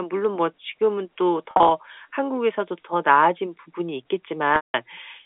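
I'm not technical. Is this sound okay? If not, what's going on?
No. There are two dropouts from packet loss with pitch repetition. Around 1.51 to 1.71 s, scattered short gaps are each patched by repeating the last pitch cycle, giving a brief buzzy, held quality. At 4.56 to 4.74 s, a solid 180 ms loss fades into silence before the speech returns.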